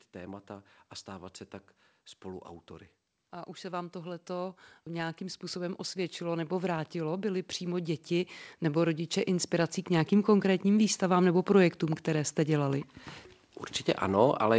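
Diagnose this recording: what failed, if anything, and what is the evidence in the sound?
Automatic gain rising in call processing: from 3.17 to 11.32 s, gain control lifts a quiet input about 15 dB, so waveform envelope and spectrogram noise floor climb together.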